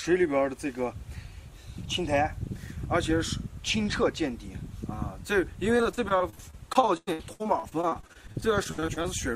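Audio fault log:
5.77–9.06 s: repeated packet loss (robotic sound). Over this stretch the stream keeps losing or receiving late chunks of audio, with 32 separate holes in about 3.3 s, the longest about 99 ms. Each hole is bridged by extending the sound just before it, so about a quarter of the span is stand-in audio. Because the patches recur every tenth of a second or so, the sound turns choppy, with pieces missing.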